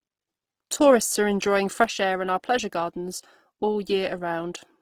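Opus compression runs through the whole speech clip: the sound is plainly grainy, rough and noisy rather than swirly, with the band still reaching about 20.4 kHz. This is likely Opus in its music (CELT) mode at a low bitrate, around 16 kbps, filling starved bands with noise.

A sudden gain jump comes at 1.84 s. The level drops by about 4 dB from one sample to the next and stays lower to the end, with speech and background noise falling together, likely from a digital gain change applied without a ramp.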